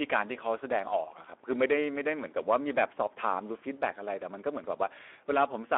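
Speex codec damage runs from the start to the end of this speech. The coder has too few bits for the excitation, which fits a rate near 11 kbps, so the voice sounds noisy and hoarse, confined to a telephone-like band of about 300 Hz to 3.5 kHz.

Hard clipping hits from 0.01 to 0.21 s and again from 2.50 to 3.30 s. Peaks driven about 8 dB and then about 7 dB past the stage's limit are sliced flat, spraying high harmonics that sound like harsh crackling fuzz on loud syllables.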